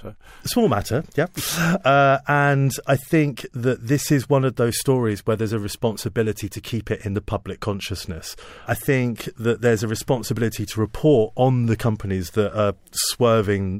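No audible technical faults anywhere in the speech recording.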